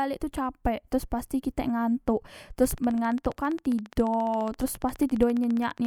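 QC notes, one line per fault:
2.65–5.86 s, train of clicks: around fifty regular, similar-shaped ticks at 14.7 per second, peaking roughly 5 dB above the speech, likely from nearby equipment interference.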